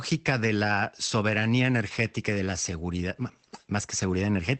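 No technical faults are audible.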